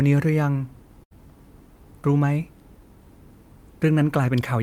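A burst of packet loss runs from 1.03 to 1.13 s. Several consecutive packets never arrived in time, so the receiver stretched the last sound for about 73 ms, fading it out. The speech then picks up further along, with about 80 ms skipped.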